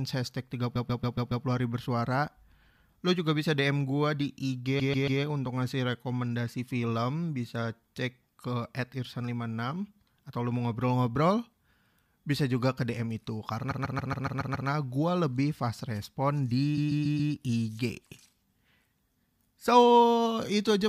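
It's a speech clip with repeated frames: the same roughly 139 ms chunk loops back-to-back, which fits a run of about six compressed frames being written or sent again. You hear a stutter at 0.75–1.44 s (five extra plays), 4.79–5.20 s right after "gua di" (three), 13.70–14.68 s (seven), and 16.77–17.32 s after "fast respon" (four). Each loop adds its length to the clip, about 2.6 s in total.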